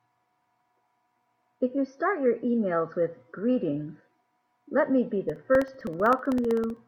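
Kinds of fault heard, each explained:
Periodic USB or driver dropouts: from 5.30 to 6.77 s the speech carries a steady ticking every 64 ms, around twenty small clicks. Each is roughly a millisecond of audio replaced by silence when something stalls the USB bus or audio driver at a fixed interval.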